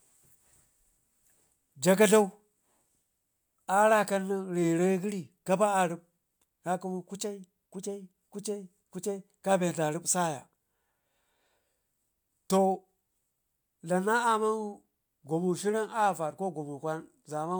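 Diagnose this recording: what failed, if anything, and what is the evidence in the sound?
Nothing in the signal chain has failed: the speech arrives as one continuous, undisturbed signal with no audible defect at any stage of the path.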